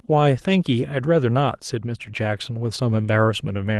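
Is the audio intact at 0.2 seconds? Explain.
Yes, the speech at 0.2 s is intact, with no dropout, glitch or other fault at that moment.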